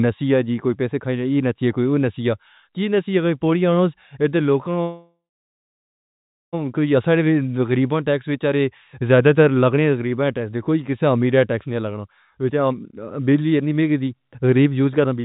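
A speech recording, band-limited to nothing above 4 kHz in the way a G.711 mu-law call path sounds. From 4.82 to 6.55 s the sound stalls: the last moment is stretched into a fading buzz that sinks into about 1.3 s of silence, then resumes where it left off. This is a call audio freeze, likely from packets held up in transit until the jitter buffer ran dry, inserting a 1.7 s gap while losing nothing. From 12.50 to 15.20 s the talking becomes hurried at an unchanged pitch, running at about 111% speed. This is a jitter buffer speed-up: with too much audio queued, the receiver repeatedly snipped out pitch-period-sized pieces, roughly a third of a second in all, to bring the delay back down.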